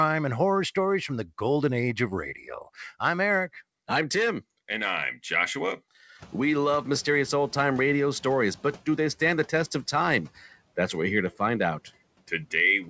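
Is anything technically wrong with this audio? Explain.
Yes. The clip, which is speech, has two noise suppressor faults.

From 2.35 to 2.48 s, just after "the golden age of", there is speech cut by the noise suppressor. The suppressor mistook part of the speech for background. It turned down about a tenth of a second of it, by up to about 8 dB. That stretch sounds swallowed and dips in level.

From 6.18 to 8.79 s, the noise suppressor is catching up. Around 6 s the room noise jumps by about 24 dB. The suppressor's noise estimate lags behind that rise. The noise first comes through with less reduction. Over 2.61 s it sinks by about 5 dB as the estimate adapts. This ends just before "do they stand the".

The room noise itself belongs to the recording and is not a fault. Nothing reaches above 8 kHz. That limit fits a G.722 call codec at 64 kbps.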